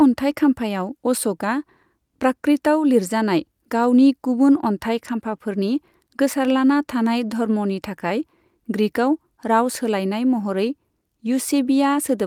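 No technical faults are audible anywhere in the speech recording.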